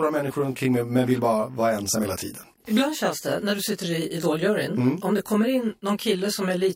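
Channel delay (comb filtering) runs throughout the speech. One channel arrives roughly 20 ms behind the other, and when the two are summed to mono, shared content cancels at evenly spaced frequencies starting around 20 Hz. The result is a rough, slightly doubled tone.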